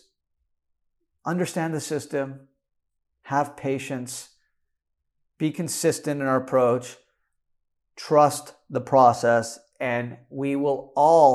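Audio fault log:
Nothing stood out on listening to the speech.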